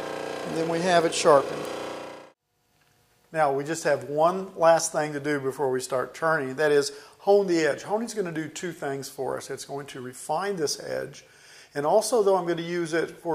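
No technical fault can be heard anywhere in this audio. There is no event to place at any point along its timeline.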